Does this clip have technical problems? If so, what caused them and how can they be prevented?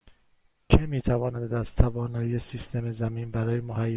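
No, nothing in the recording points to a technical fault, so there is nothing to trace back to a cause or to prevent.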